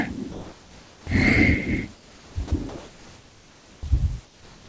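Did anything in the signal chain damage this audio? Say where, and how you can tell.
Yes. Comfort noise in place of the background, at the call-processing stage: 0.32–1.07, 1.94–2.36, 2.69–3.83 and 4.25–4.68 s go steady and featureless. The likely cause is discontinuous transmission.

Sound dropped by the voice detector: 30 ms vanishes at 2.48–2.51 s and is replaced by flat noise. The detector likely mistook that sound for background.

Onset clipped by the voice detector: sound at 3.81–3.83 s starts abruptly, losing its first 20 ms. The detector likely reacted late, so comfort noise covered the start.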